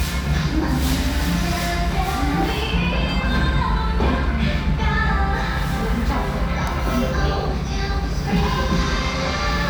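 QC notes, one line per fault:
Nothing to flag here; these sounds come across without any technical trouble worth noting.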